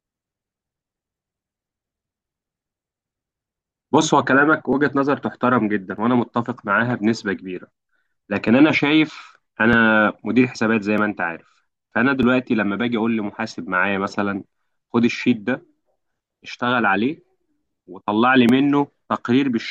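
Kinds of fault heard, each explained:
Clock drift buffer slips: a click or pop recurs every 1.25 s through the speech, from about 0.97 s to 18.49 s, some fifteen in all. The likely cause is two devices running on separate clocks that disagree by roughly a thousand parts per million, so the buffer between them drifts until a block of a few dozen samples is dropped or repeated, leaving a brief discontinuity at each slip.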